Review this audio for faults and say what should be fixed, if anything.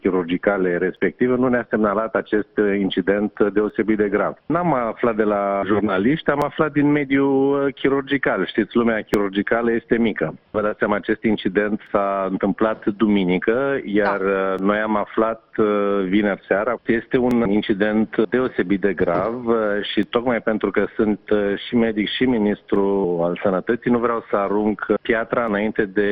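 Clicks recur every 2.72 s from 0.97 to 25.48 s. These are likely clock drift buffer slips, caused by a clock mismatch of around 400 ppm. To prevent this, lock both devices to one shared clock or add adaptive sample-rate conversion.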